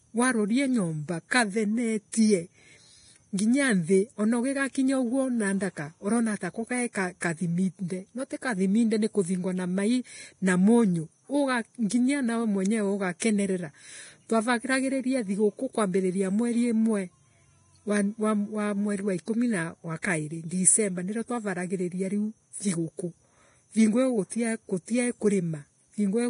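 It's a speech recording, and the whole thing has that hissy, grainy texture with nothing at all above 10.6 kHz. The tones come out rough and the attacks are smeared. That combination is likely Vorbis compression run hard, at a rate that fits something around 29 kbps. The encoder cuts off the top end and quantises what's left of the treble so coarsely that the fine detail turns into noise of roughly the same energy. Three onsets also show pre-echo: at 7.20 s, from 13.19 to 13.22 s, and from 20.02 to 20.04 s. In each one a short wash of hiss, about 17 to 24 ms long, arrives just before a sharp attack. That happens because the codec spreads its quantisation noise across the whole transform block, so noise meant for the loud transient leaks into the quiet moment in front of it and softens the hit.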